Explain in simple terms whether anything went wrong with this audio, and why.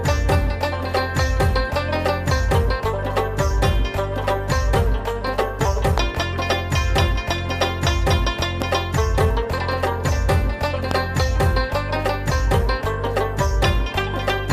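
Loud pops break in three times. There are two quick pops from 5.98 to 6.17 seconds, then single ones at 8.62 to 8.64 and 10.91 to 10.93 seconds. Each is a sudden electrical jolt, likely from a plug, switch or static. The sound continues underneath.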